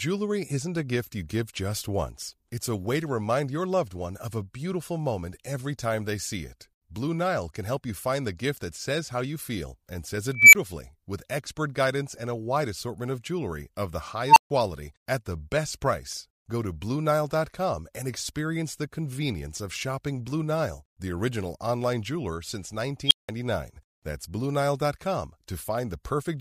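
Speech with an unstable filter at 10.34 s after "you feel and says", 14.28 s and 23.07 s. A runaway recursive filter makes tones near 2 kHz, 1 kHz and 3 kHz swell over 187, 87 and 38 ms. Each clips, overflows, and cuts out for 20, 140 and 180 ms.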